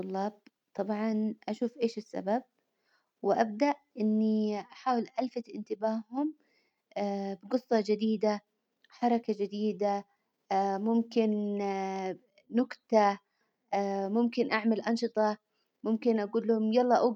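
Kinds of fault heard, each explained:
No kinds of fault turn up here; nothing in the recording trips the ear as a technical problem.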